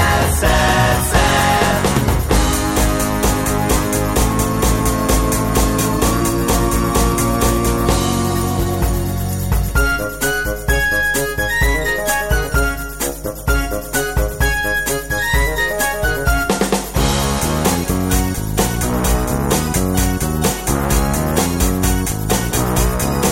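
A steady mains hum at 50 Hz, with a few low harmonics stacked above it, runs under the sound for the whole clip, sitting roughly 15 dB below the wanted signal. It comes from power-line current leaking into the signal path, most plausibly through a ground loop or a transformer close to the cabling.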